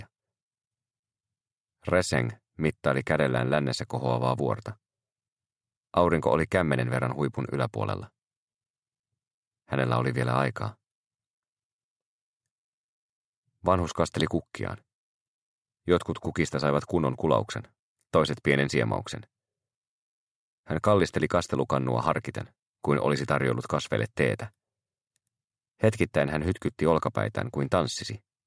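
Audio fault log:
No faults are heard anywhere in this audio. Nothing in it calls for a fault line.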